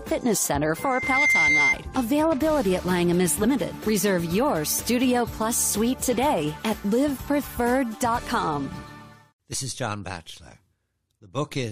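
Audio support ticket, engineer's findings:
Rising whistle at 2.1 kHz, 0.76 to 1.76 s: a single tone swells over roughly half a second to about 5 dB above the programme, then stops. Loudspeaker feedback squeal. Mic is picking up its own monitor or PA output, and loop gain exceeds unity at 2.1 kHz, so that frequency regenerates until the loop breaks. Check mic-to-speaker placement, lower monitor gain, notch near 2.1 kHz.

Small forward jumps at 1.24 s (about 50 ms lost, inside the squeal), 3.38 to 3.44 s (about 20 ms lost) and 9.51 to 9.55 s (about 50 ms lost). Compressed frames skipped. Decoder dropped missing or corrupt frames, so audio jumps ahead at each join. Suspect file corruption or transport loss upstream of decode.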